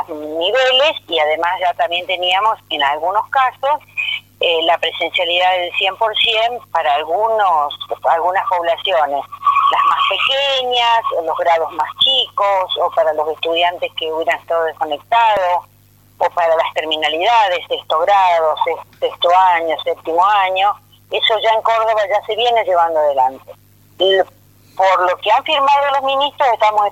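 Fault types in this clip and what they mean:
Overlap between stream segments: three tiny skips where the sound jumps forward, at 13.38, 15.37 and 16.36 s. About 17 to 19 ms of audio disappears each time. They fall on one-second boundaries, which fits one-second stream segments. Neighbouring segments claim overlapping time stamps, so the player trims the overlap even though that audio was not duplicated. The waveform breaks where the trimmed material is missing.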